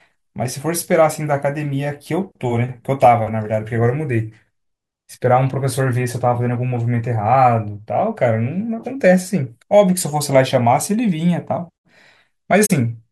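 AAC frame loss with muting at 12.66–12.71 s: about 43 ms of data, fitting two frames, decoded as silence, leaving a soft-edged gap.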